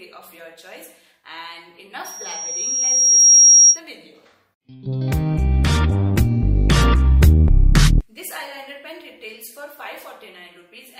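From 2.04 to 3.80 s there is loudspeaker feedback squeal. A microphone is hearing its own loudspeaker, and the loop gain passes one at a single frequency. A pure tone near 5.7 kHz swells over about a second and a half, peaking about 5 dB above the sound.

From 5.30 to 7.30 s the adaptive stream drops to a lower bitrate. The quality changes suddenly, with no gap, and codec artefacts rise. This points to a fall from about 64 to 16 kbit/s Opus.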